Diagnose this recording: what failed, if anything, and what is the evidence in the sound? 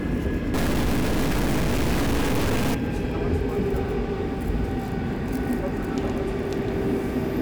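From 0.54 to 2.75 s the sound turns harsh and buzzy, and quiet stretches fill with noise at about -20 dBFS. This points to a stuck bit, likely at the converter. One high-order bit stays fixed, so values jump by its weight as the waveform crosses zero.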